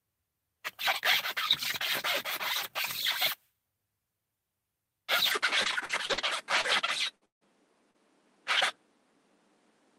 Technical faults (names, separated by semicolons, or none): input switched to a poorer device; repeated packet loss (robotic sound); lost packet rebuilt from error correction; short concealed packet loss; burst of packet loss; long network dropout